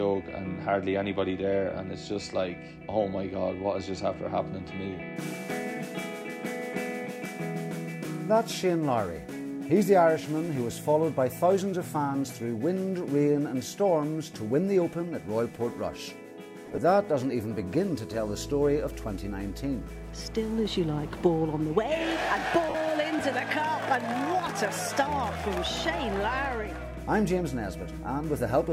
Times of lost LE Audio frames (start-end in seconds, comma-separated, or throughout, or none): 16.65-16.78, 22.69-22.75